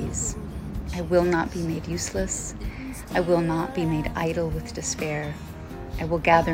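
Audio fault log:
No faults are audible anywhere in this clip.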